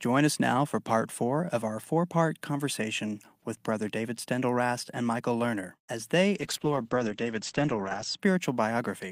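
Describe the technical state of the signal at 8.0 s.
At 8.0 s a call bitrate drop is underway, from 6.39 to 8.25 s. The encoder's budget has collapsed, consistent with about 40 kbps falling to 10 kbps, so the speech is coded coarsely and band-limited from 20 kHz to 8 kHz, sounding muffled and rough.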